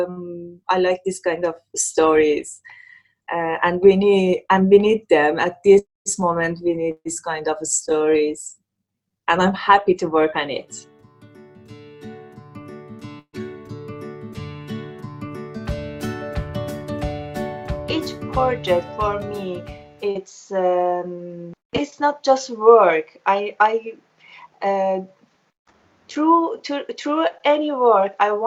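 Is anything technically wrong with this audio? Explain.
Yes. The audio has two kinds of network fault.

A burst of packet loss occurs at 6.91 to 7.07 s and again at 13.19 to 13.35 s. Each time, about 140 ms of audio never arrived. The receiver extended the last sound and faded it, leaving 40 ms and 60 ms of silence. The sound then resumes with that stretch missing.

A short concealed packet loss occurs at 20.11 to 20.17 s. About 40 ms went missing. The receiver filled the hole by continuing the preceding sound, then blended back into the real audio. It is heard as a brief smear.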